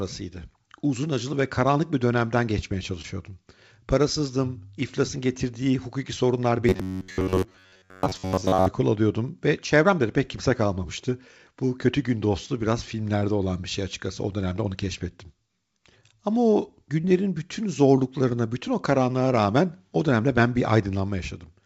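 At 3.02–3.05 s, just after "karanlık bir dönemden geçmeye", a short concealed packet loss replaces about 20 ms of missing audio with synthesized continuation of the preceding sound. It is heard as a brief smear before the real signal blends back in. The same fault recurs at 13.19–13.23 s, between "kötü gün dostu biraz" and "olan bir şey açıkçası", and at 17.01–17.05 s, just before "bütün zorluklarına bütün o".

From 6.69 to 8.68 s the speech turns into a rigid, metallic robotic sound from repeated short buffers, with a fixed buzz near 94 Hz. That rate fits a buffer of roughly 10.7 ms being replayed in place of most of the incoming audio, likely because new packets arrived too seldom. Throughout the clip, the call codec leaves nothing above 8 kHz.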